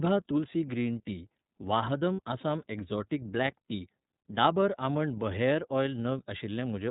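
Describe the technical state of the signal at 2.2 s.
At 2.2 s the signal carries lost iLBC frames, from 2.14 to 2.20 s, between "तुलसी ग्रीन टी वाहदम" and "आसाम एक्जोटीक ब्लॅक". The decoder bridges the roughly 60 ms gap, consistent with two missing 30 ms frames, by repeating the last pitch cycle mixed with noise. This produces a brief held, buzzy vowel rather than the silence or click of a plain dropout. The voice returns almost immediately afterwards because each frame decodes on its own.

Underneath is the iLBC codec itself, which is present throughout and plainly audible. Speech is band-limited to 4 kHz and has a slightly rough, synthetic texture, consistent with the 13.33 kbps, 30 ms-frame mode. Unlike the gap, this coloration is constant rather than a momentary event.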